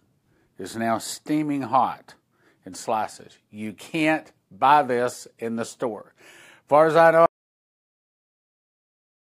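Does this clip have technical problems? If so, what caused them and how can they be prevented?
Yes. An audio dropout to silence begins at 7.26 s and lasts to the end. The speech stops abruptly into silence, with no room tone. The input was likely lost while recording continued. Secure cables and monitor input levels during recording.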